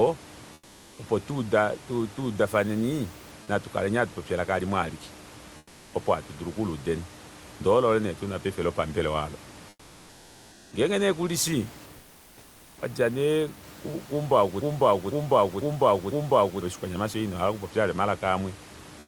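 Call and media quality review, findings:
Comfort noise in place of the background at 0.53–0.97 s, 5.57–5.93 s, 9.69–10.71 s, 11.97–12.77 s and 18.99–19.07 s. Room noise, about 25 dB below speech, turns into flat, detail-free hiss about 3–5 dB quieter during pauses. Likely sender-side DTX with receiver-synthesised noise, consistent with Opus DTX. Unlike a gate or dropout, the pauses are never truly silent.

Broken-record loop at 14.62–16.62 s. A 0.5 s fragment repeats exactly, back to back, four times, and the audio for that span is lost. Likely a stalled player, encoder or stream re-sending its last buffer. Unlike loss concealment, the repeats are identical and don't fade or smear. Band-limited call-path sound, near 12 kHz, runs throughout.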